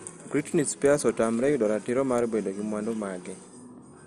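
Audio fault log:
Throughout, MP2 compression: the speech sounds dull and gurgling, with a granular roughness from coarsely quantised sub-bands, likely MPEG Layer II coding at a rate that fits 64 kbps. On a spectrogram, energy stops sharply at 13.6 kHz, with blocky, patchy upper bands.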